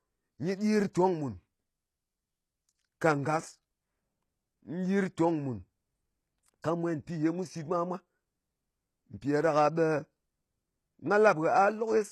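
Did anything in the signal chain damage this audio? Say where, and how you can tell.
Yes, the damage is at the codec stage and runs through the whole speech clip. The sibilants sound gritty and lispy, and nothing remains above 12.3 kHz. That pattern is likely HE-AAC compression at a low bitrate, around 16 kbps. The codec encodes only the lower band and synthesises the treble by copying lower bands upward under a coarse envelope. The rebuilt top end is not the original, and its harmonics don't line up with the real ones.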